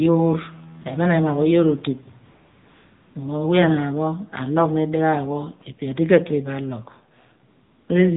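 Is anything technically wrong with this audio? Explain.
Yes. AMR narrowband mobile codec damage runs through the whole clip. The speech is coded with a vocal-tract model excited by a few pulses per subframe, with nothing above 4 kHz. The plainly buzzy, synthetic quality points to a low mode, around 7.4 kbps.

AMR comfort noise appears at 0.82 s, from 2.26 to 3.16 s, and from 7.50 to 7.88 s. The sender judged these moments silent and stopped sending speech frames, so the receiver substituted synthetic noise. That noise is steady and smooth, and it switches in and out in place of the real background.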